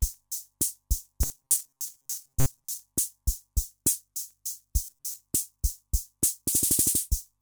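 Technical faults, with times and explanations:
1.23–2.80 s and 4.84–5.20 s: robotic sound from repeated short buffers. In both stretches the sound hardens into a rigid, metallic buzz at 134 Hz that only loosely tracks the underlying audio. The likely cause is audio arriving too seldom, so the player repeats a roughly 7.5 ms slice, one period of 134 Hz, for most of the first stretch and about half of the second. A spectrogram would show even harmonic lines at 134 Hz multiples, and the waveform would show identical short cycles stamped end to end.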